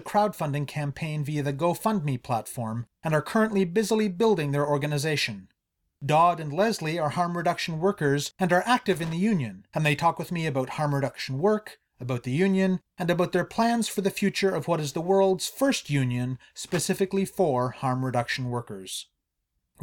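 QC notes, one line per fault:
8.93–9.13 s and 16.65–16.86 s, loose connector crackle: a worn or dirty contact in the signal path briefly made and broke contact as it shifted, chopping the speech, heard as two irregular scratchy bursts lasting about 0.2 s each.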